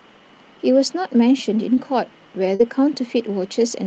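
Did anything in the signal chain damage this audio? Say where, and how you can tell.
Yes: short concealed packet loss on the network leg, at 1.75–1.79 s and 2.55–2.61 s. The decoder stretched the preceding sound into brief smeared wobbles, not the clean silences of uncovered dropouts.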